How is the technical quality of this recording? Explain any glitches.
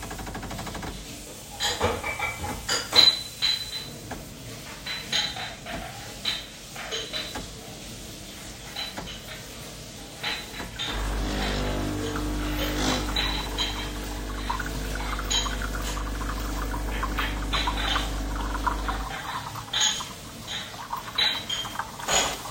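No glitches are audible anywhere in the recording, and nothing in it needs explaining.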